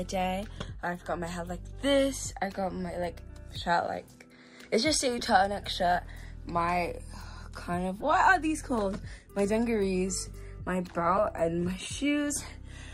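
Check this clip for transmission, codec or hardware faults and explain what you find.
Four short bursts of corrupt frame decoded appear, at 0.57 to 0.65 s, 5.19 to 5.23 s, 8.00 to 8.05 s, and a brief one at 11.18 s. Each time, damaged bits in a compressed frame were decoded as if valid, so misread codes and gains put energy at the wrong frequencies for a few frames. The result is a chirp or squeak of noise, around -20 to -25 dBFS, reaching about -15 dBFS at 11.18 s. Unlike a lost packet, which leaves a gap or smeared concealment, these add new, unrelated sound.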